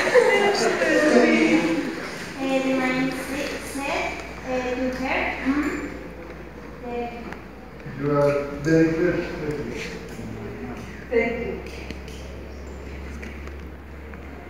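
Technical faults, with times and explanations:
Nothing stood out as a technical problem on listening to the audio.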